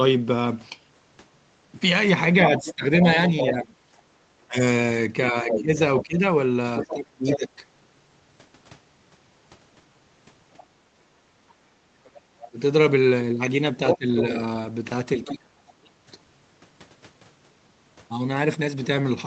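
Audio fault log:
2.42 to 3.52 s, 5.50 to 7.36 s and 10.59 to 15.32 s: other side's voice leaking through. A second voice sits under the main talker in all three stretches. It runs about 5 dB below the main speech. It sounds band-limited, with nothing above 8 kHz, like the rest of the Opus call path. The likely cause is that the talker's loudspeaker fed back into the microphone and the echo canceller left part of it behind.
2.58 to 7.62 s and 12.51 to 15.96 s: speech suppressed in double talk. The main voice dips and loses pieces. In the first span the deepest dip is around 20 dB, and the cuts add up to about a second and a half. In the second span the dips go as deep as roughly 35 dB and total about a second. Likely both sides were talking at once, and the canceller could not tell them apart, so it turned both down.
10.94 to 11.33 s: background gated by the echo canceller. The room sound drops by up to about 11 dB, in short gaps that add up to roughly 150 ms, and then comes back. 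The canceller clamped the microphone hard while the loudspeaker was playing, which cut the background. It let go once the loudspeaker signal eased.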